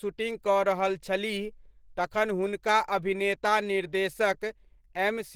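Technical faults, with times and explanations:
Throughout: Opus compression, plainly audible across the speech, which sounds muffled, hoarse and grainy, likely from the encoder's hybrid speech mode under a tight bit budget that fits 16 kbps, trading fine detail for noise-filled bands even though content extends to 20.2 kHz.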